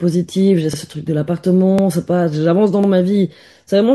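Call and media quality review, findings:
Overlapping chunks: stutter at 0.74–0.79 s, 1.79–1.84 s, 2.84–2.89 s, recurring every 1.0 s. About 50 ms of speech replayed at each join. Chunking/buffering stage; each chunk begins before the previous one ends, duplicating the overlap.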